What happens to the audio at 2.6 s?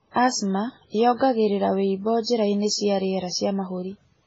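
At 2.6 s the speech is dull above 7.6 kHz, with layered smearing and warble, likely from transcoding between lossy codecs, a low-bitrate MP3 then WMA, present throughout.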